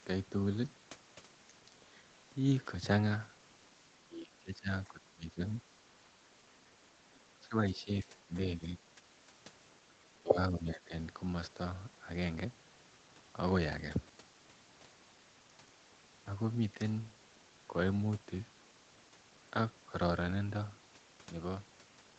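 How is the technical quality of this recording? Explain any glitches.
The recording has repeated dips in the speech level, and the audio carries nothing above 8 kHz, as expected from a wideband call path.

Speech suppressed in double talk occurs at 4.04–4.69 s, 4.87–5.42 s, 7.48–8.35 s, 8.58–9.01 s, 9.88–9.93 s and 10.18–10.93 s. The talker's level drops by up to about 15 dB, briefly and in pieces, likely because an echo canceller could not separate the talker from overlapping far-end echo and attenuated both. The waveform shows sudden notches in the envelope, and the spectrogram shows speech energy thinning out in patches.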